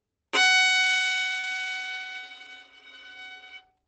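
Short concealed packet loss occurs at 1.39–1.45 s and 2.21–2.25 s, where about 40 ms and 20 ms of audio arrived too late and the receiver bridged each gap by extending the preceding sound. The result is a brief smear rather than a silent dropout, which is what distinguishes concealment from a plain gap.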